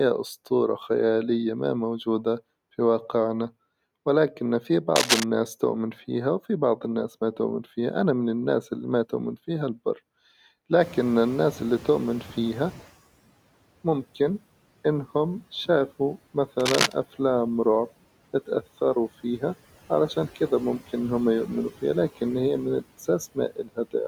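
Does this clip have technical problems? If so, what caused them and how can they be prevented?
Yes. Noise suppressor artifacts run through the whole speech clip: the suppressor pulls steady background down by about 17 dB frame by frame, so the noise sinks between words and rises under them. Gentler suppression settings, or a quieter recording environment so less reduction is needed, would prevent this.

Cable scratch noise appears twice: from 4.96 to 5.24 s, right after "في واقعنا ولكن في", and from 16.59 to 16.92 s, after "ممكن إنهم شافوا". Both are dense, ragged rustling bursts at roughly speech level, likely from a worn cable or connector being moved. Replacing or securing the cable prevents it.

Noise suppressor catching up occurs from 10.8 to 12.89 s. The room noise jumps about 22 dB near 11 s, and the suppressor's noise estimate trails it. Background therefore passes with only about 12 dB of reduction before settling over 2.09 s. 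A faster-adapting suppressor would shorten this.

Speech cut by the noise suppressor occurs from 23.35 to 23.94 s, after "فيها لكن هي من". Around 150 ms of quiet speech detail is treated as noise and dips by up to about 17 dB, sounding swallowed. Less aggressive suppression, or better speech-to-noise ratio at the microphone, prevents it.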